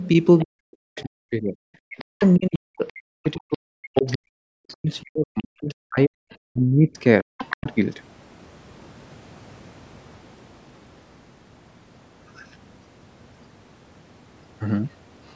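At 0.38 s a faint second voice enters, the other side's voice leaking through. It returns at 1.99, 2.87, 3.26 to 4.17, 7.38 and 12.36 s. It sits roughly 15 to 35 dB under the main speech. Residual loudspeaker echo the canceller missed is the likely cause.

From 0.43 to 7.67 s the main speech keeps sinking, with the deepest dips near 40 dB. About five seconds are affected. This is speech suppressed in double talk. The canceller likely mistook overlapping talk for echo and turned both down. The speech fades and breaks apart. Its band already stops at 8 kHz from normal call processing.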